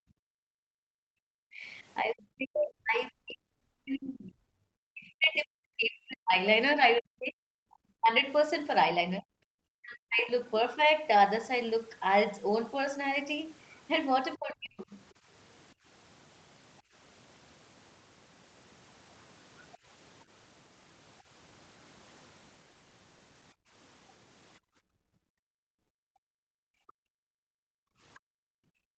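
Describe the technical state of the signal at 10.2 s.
The speech dips sharply between 9.17 and 10.36 s, at worst by about 40 dB. This is likely speech suppressed in double talk, where the echo canceller mistook the talker for loudspeaker echo.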